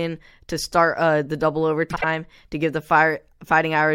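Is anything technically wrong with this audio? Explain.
Yes. From 1.90 to 2.04 s, just after "start uh the double" and before "to give the", there are frames out of order. Two adjacent runs of about 52 ms each were delivered and decoded in swapped order, consistent with two-frame runs. The speech there plays halves-reversed as a garbled flutter, though nothing is lost in time.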